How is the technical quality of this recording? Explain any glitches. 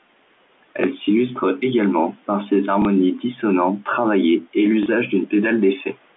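Three glitches stand out in this speech: one loud pop near the start and two small blips from packet loss later on, all heard through the narrow band of a phone line.

The loud pop comes at 0.84 to 0.86 s and peaks well above the speech, roughly 15 dB over it. That's a single sharp click or thump riding on top while the talking carries on underneath. The likely cause is a sudden voltage step, from something like a plug, a switch, static or a driver hiccup, that got into the signal path. The circuitry after it shaped the step into that brief burst.

Packet loss with the last packet repeated shows up twice, at 2.82 to 2.85 s and at 4.83 to 4.86 s. Each gap is 30 ms, which fits a single lost packet. The receiver filled the hole by playing the previous chunk again, so you get a small blip before the audio picks back up.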